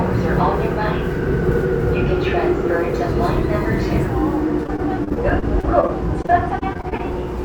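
Repeated packet loss (robotic sound) runs from 4.63 to 7.14 s of this sound clip. About twenty short dropouts, none longer than 26 ms, are each patched by stretching the preceding audio, so this stretch turns choppy, with small pieces missing.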